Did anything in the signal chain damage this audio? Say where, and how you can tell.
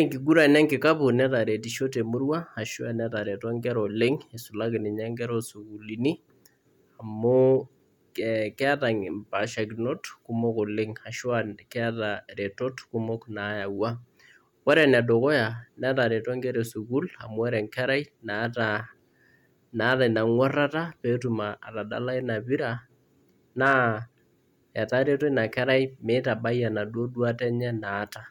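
Yes. Hard clipping occurs at four points: 0.38 to 0.89 s, just before "netaretishe temurua ashu netareto", then 14.70 to 14.96 s, 19.85 to 19.93 s and 23.64 to 23.77 s. In each, loud speech peaks push a converter or gain stage past its maximum level, by about 3 dB in the first passage and about 1 to 2 dB in the later ones. The waveform tops are cut flat, adding high harmonics heard as crackle and grit on those peaks.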